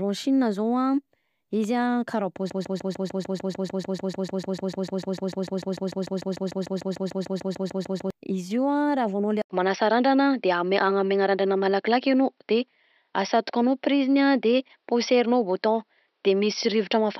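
From 2.5 to 8.1 s the speech sticks in a broken-record loop: a 149 ms fragment repeats exactly, back to back, 38 times, most likely because the player or stream stalled and kept resending its last buffer. The speech that should have filled those seconds is lost.

At 9.42 s an 80 ms silence precedes a change in character that lasts to the end. Nothing remains above 5.7 kHz, the level shifts by roughly 5 dB, and a new noise floor sits well below the speech. The likely cause is an input switched to a poorer device.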